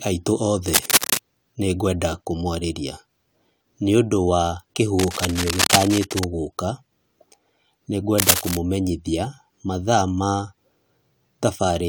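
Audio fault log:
0.68–1.20 s, 4.99–6.24 s and 8.18–8.57 s, cable scratch noise: three bursts of scratchy rustle, roughly as loud as the speech, the first ending just before "nĩngwenda kũmwarĩria" and the second starting right after "nĩũndũ wa". The likely cause is a worn connector or cable whose contact resistance fluctuates as it moves. On a spectrogram this appears as dense, ragged broadband smears, and on the waveform as jagged, irregular spikes.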